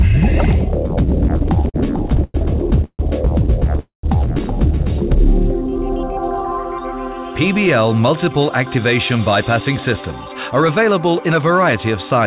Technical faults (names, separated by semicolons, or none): repeated stalls (stutter); call audio freeze; jitter buffer slow-down; jitter buffer speed-up